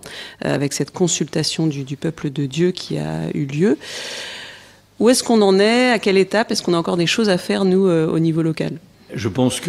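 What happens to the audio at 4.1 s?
Around 4.1 s you're hearing repeated frames. From about 4.03 to 4.22 s, a short chunk of roughly 64 ms gets played over again three extra times, which points to the same compressed block being written or sent more than once before the decoder got it. It comes across as a quick stutter, the sound catching and looping on itself for a moment. Those repeats push everything after it about 192 ms later.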